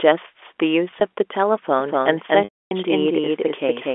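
Packet loss with pitch repetition occurs at 0.91 to 1.01 s. Brief gaps of at most 10 ms, totalling 40 ms, are filled by repeating the last pitch period, which gives a slightly held, buzzy quality. A doubled audio track starts abruptly at 1.80 s and runs to the end. A dry, full-band copy at about the same level trails by roughly 200 ms, likely from a second, slower capture path. Packet loss with pitch repetition returns at 2.44 to 2.71 s, where 270 ms is lost. The repeated period fades into silence before the sound returns through a short cross-fade.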